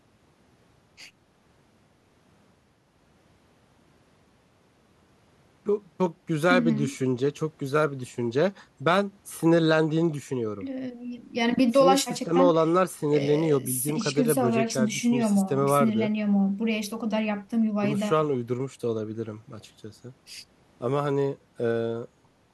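A speech recording with no technical faults to point to. There is nothing here that needs a time or a cause attached to it.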